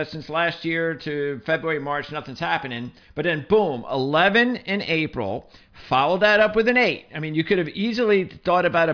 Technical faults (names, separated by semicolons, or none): none